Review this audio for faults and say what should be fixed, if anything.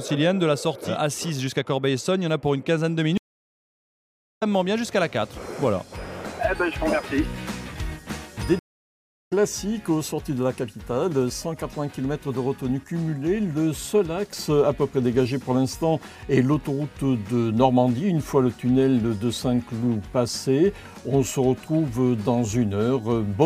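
Two stream reconnects occur. At 3.18 s the audio falls silent for 1.18 s. It resumes at 4.43 s, about a second further on. At 8.59 s a 0.67 s gap ends at 9.33 s, skipping roughly 0.7 s. Each time the connection dropped and a fresh decoder started mid-stream, so material is lost.

A larger client buffer, with resume from the last received position, would prevent this.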